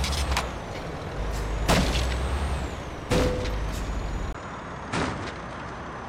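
At 4.33 s the sound changes character and stays that way to the end. A gap of 20 ms marks the switch. After it, nothing is left above 9.9 kHz, so the top end turns dull. The level drops by around 5 dB, and a faint new noise floor appears well beneath the signal. This points to an input switched to a poorer device, likely a different microphone with a narrower band and its own noise.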